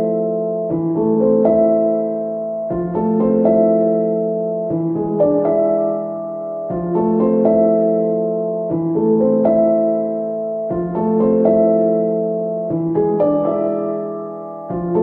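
No technical faults can be heard anywhere in this recording of sounds.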